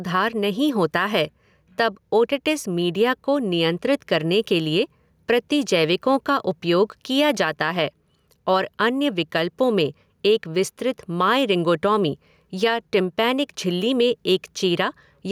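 Throughout the recording the speech shows gain pumping, a swing of around 5 dB. The likely cause is input gain set much too high for the microphone, with a fast limiter or compressor clamping down on each peak. Loud and quiet passages sit unnaturally close in level, giving a squashed quality to the whole take.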